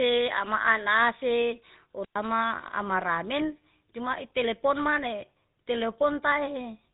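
Across the whole recording the speech carries the GSM full-rate codec's gravelly, buzzy texture, with nothing above 3.8 kHz. That band edge alone could be ordinary telephone filtering. The rasping roughness is what marks a pulse-excited vocal-tract model at a rate that fits 13 kbps.

From 2.01 to 2.16 s a wireless microphone squelch dropout occurs. The FM link fades, hiss swells briefly, and the receiver mutes the output for about 110 ms. The speech then resumes. Unlike a digital packet loss, the hole is preceded by rising static rather than opening abruptly.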